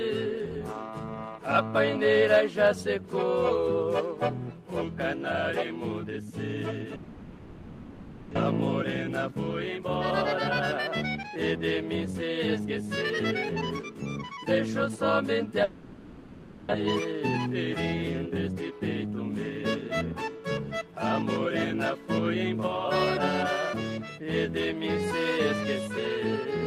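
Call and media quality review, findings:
Long network dropout, 6.95–8.37 s and 15.64–16.75 s: last sound smeared into a fading buzz, then audio resumes with about 1 s missing each time. Likely packet loss on the network path, concealed by receiver's loss concealment; first gap shifts delay roughly 0.4 s.

Jitter buffer speed-up at 9.29–9.84 s (117%), 10.94–12.82 s (108%), 13.82–14.97 s (107%), 18.32–18.81 s (108%): audio hurried, pitch unchanged. Receiver trimming pitch-period slices to drain an overfull buffer, roughly 0.05–0.15 s removed per stretch.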